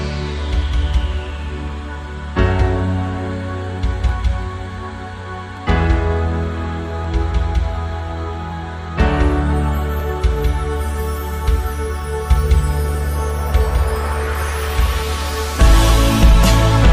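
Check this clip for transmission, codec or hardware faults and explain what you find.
One fault is present: a regular click that recurs throughout most of the clip. From 1.14 s to 15.90 s there is a brief click about every 1.48 s, roughly ten in all. These are clock drift buffer slips, likely caused by two devices running on independent clocks that disagree by roughly 0.1%. The buffer between them drifts until roughly 70 samples are dropped or repeated. On a waveform each slip is a small discontinuity, and a spectrogram shows evenly spaced thin vertical lines.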